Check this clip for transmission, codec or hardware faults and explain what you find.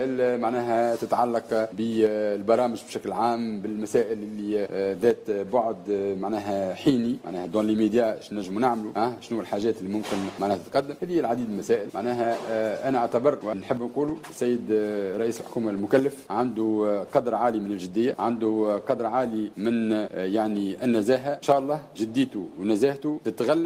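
Nothing here stands out as a problem; the audio runs along steadily with no dropouts, glitches or odd artefacts to point to.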